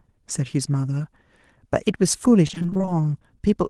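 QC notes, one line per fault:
2.47–3.02 s, repeated packet loss (robotic sound): the speech turns choppy, with fragments missing. Packets kept dropping in quick succession, and each gap was patched by extending the preceding sound, so roughly half this stretch is concealment rather than real audio.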